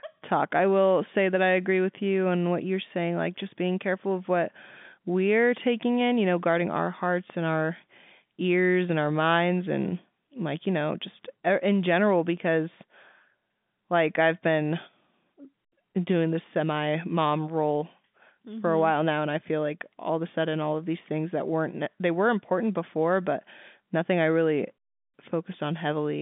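No technical faults can be heard in the speech. It comes across the G.711 telephone coding as a narrowband line, roughly 150 Hz to 3.6 kHz with nothing above about 3.7 kHz.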